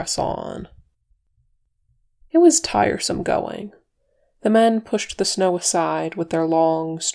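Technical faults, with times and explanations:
No technical faults can be heard anywhere in the speech recording, and the signal stays intact and continuous throughout.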